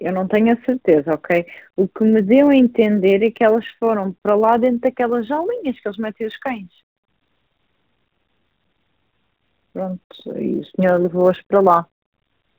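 From start to finish the speech is squeezed through the AMR narrowband mobile codec. Nothing above about 4 kHz survives, and the voice takes on a buzzy, synthetic edge that fits a mid-range rate near 10.2 kbps. Unlike a plain low-pass filter, the codec remodels the voice itself rather than only dulling it.

Across the whole clip there is also a block size mismatch (truncated): one stage hands over longer blocks than the next reads, and each block's tail is discarded. This leaves a steady 100 Hz buzz at the block rate. Pace stays effectively normal, so the dropped portion is tiny, and the fixed rate sets it apart from random dropouts.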